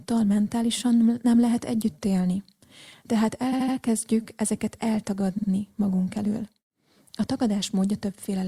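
A brief stutter at 3.52 s replays a 78 ms slice of speech three times, adding 0.24 s, and a second at 5.37 s replays a 52 ms slice twice. These are repeated frames: compressed blocks were duplicated, and their length suggests roughly 26 ms codec frames.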